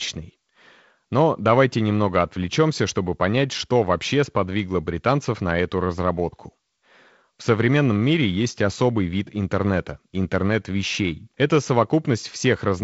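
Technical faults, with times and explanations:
Nothing stood out as a technical fault on listening to this speech.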